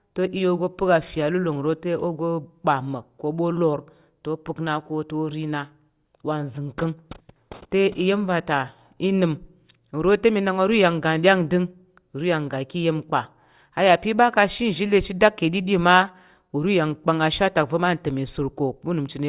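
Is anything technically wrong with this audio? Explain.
No, nothing in this speech recording stood out as technically wrong on listening.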